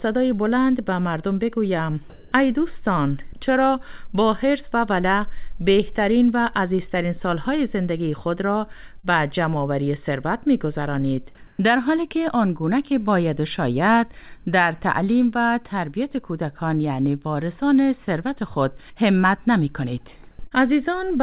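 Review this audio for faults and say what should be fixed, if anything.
Sound dropped by the voice detector, 2.10 to 2.32 s: about 90 ms of sound vanishes and 220 ms of steady noise plays instead, likely because the detector mistook quiet sound for background.

Short concealed packet loss, 9.00 to 9.05 s and 20.47 to 20.53 s: each time about 40 ms went missing. The receiver extended the preceding sound for 35 and 38 ms, leaving a brief smear.

Comfort noise in place of the background, 11.47 to 11.59 s: the real background, about 27 dB below the loud parts, becomes 120 ms of featureless synthetic noise about 2 dB quieter. The likely cause is discontinuous transmission during a pause.

To prevent this, disable discontinuous transmission or raise the voice detector's sensitivity, and give the jitter buffer more headroom or enable forward error correction so brief losses arrive in time.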